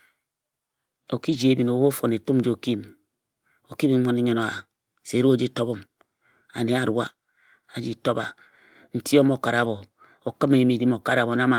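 At 1.29 to 1.35 s, a brief patch turns rough and noisy. It is a lost packet rebuilt from error correction, about 40 ms of audio that fits two lost packets. A later packet carried a low-bitrate copy, so no gap opens. After "o mo kare", the same roughness returns at 9.63 to 9.65 s, about 20 ms, fitting one packet.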